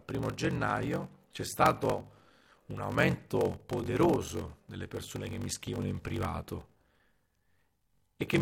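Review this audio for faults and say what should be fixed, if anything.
A block size mismatch (padded) runs through the whole clip. One stage writes shorter blocks than the next reads, which fits a 1024-sample read, and zeros fill each gap. This puts a 46.9 Hz buzz over the speech and slows it to 0.861 times normal speed, at about its usual pitch. To prevent it, match the block sizes between the stages, or buffer the stream so that every read is filled with real samples instead of zeros.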